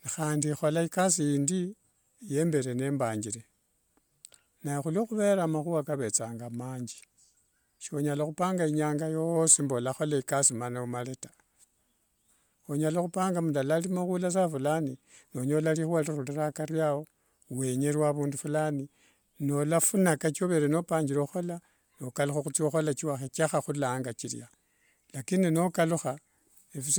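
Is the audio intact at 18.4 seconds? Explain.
No. At 18.4 s, as throughout the clip, the speech carries a breathy, grainy edge, likely from Bluetooth LC3 compression. Its transform coding in short frames, which fits 10 ms frames near 48 kbps, replaces detailed upper-band content with noise, leaving nothing above 20.1 kHz.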